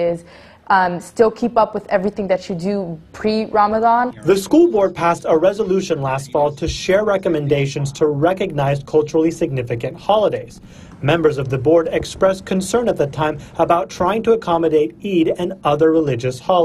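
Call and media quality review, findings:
No faults found in the review. Nothing audible points to a defect in capture, transport or playback.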